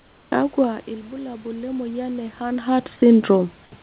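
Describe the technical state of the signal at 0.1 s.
At 0.1 s, comfort noise replaces the background from 0.00 to 0.32 s. A steady, featureless hiss, about 4 dB quieter, stands in. Likely discontinuous transmission, with the receiver synthesising fill noise.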